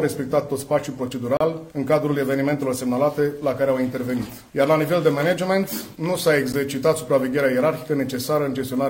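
At 1.37 to 1.41 s, a 35 ms block of digital silence cuts in abruptly. A shorter 12 ms dropout at 6.53 s fits a 512-sample buffer left unfilled.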